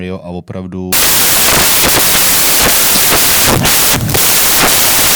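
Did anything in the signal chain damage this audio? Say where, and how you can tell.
Yes. From 0.93 s to the end of the speech at 5.15 s the signal turns into loud, harsh broadband noise, which points to samples built from the wrong bytes at the sample-format conversion stage. The reader is assembling each sample with its bytes misaligned or in the wrong order, so the rapidly changing low-order bits land in the high-order position and dominate every value.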